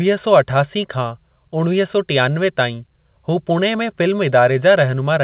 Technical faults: none

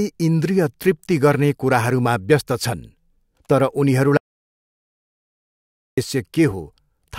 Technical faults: audio dropout to silence

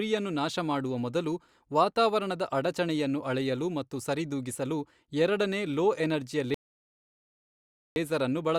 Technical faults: rebuffering stall

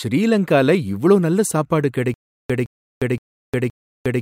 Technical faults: stutter with silent gaps

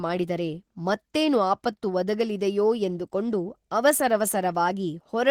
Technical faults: Opus voice compression

